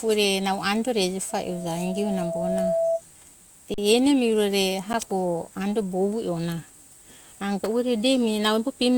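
Loudspeaker feedback squeal runs from 1.29 to 3.02 s: the microphone picks up its own loudspeaker, and at 664 Hz the loop gain passes one, so a pure tone swells over roughly one and a half seconds until it sits about as loud as the speech.

Underrun with held sample occurs at 3.74 to 3.78 s, a 40 ms gap, and again at 4.93 s, lasting 10 ms. Each time the output buffer empties and the converter freezes on its last value, so the sound flattens out. The audio from those moments is lost rather than delayed.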